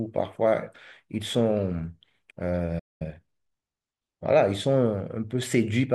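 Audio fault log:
2.79–3.02 s, playback stall: The speech cuts out mid-flow and the output drops to silence for about 213 ms before resuming. The likely cause is the player running short of buffered data, or its output thread being blocked briefly, so nothing reached the device until supply recovered.
3.02–3.22 s, time-compressed catch-up: Right after the gap, the speech runs at twice its normal rate for about 0.2 s while keeping its original pitch. It sounds hurried. This happens because the player is working off the backlog left by the stall. It drops small slices of audio and cross-fades across the joins, which shortens the material without shifting pitch.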